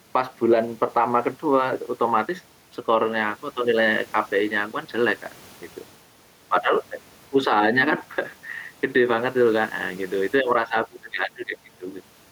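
Right through the speech there's gain pumping. The room's background noise sits about 36 dB below the voice, and the gain swings by roughly 5 dB. Loud and soft passages end up squashed closer together. The likely culprit is input gain set far too hot, with a fast limiter or compressor clamping down on each loud burst and letting go in the gaps.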